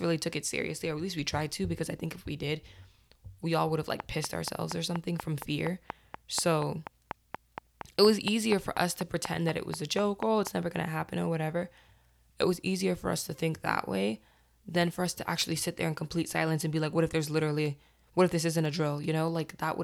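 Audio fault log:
4.0–10.48 s, train of clicks: after "we all would have", a regular ticking starts, about 4.2 clicks per second, roughly thirty in all, each much the same shape and standing around 15 dB above the speech. It runs until just before "never gonna happen or". The clicks land in the pauses as well as on the speech, so something is adding pulses on top of the signal. The likely source is interference from nearby equipment or a faulty connection or power supply. A dropout only removes signal, so it could never tick in silence.
17.66–19.64 s, periodic USB or driver dropouts: after "like what if there's", a few ticks arrive exactly one second apart. Each is a tiny gap, a fraction of a millisecond of audio replaced by silence, as if a background task blocked the bus or driver on a fixed schedule. The ticks sound only where speech is present, because cutting out silence leaves nothing to hear. 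This separates them from the earlier click train.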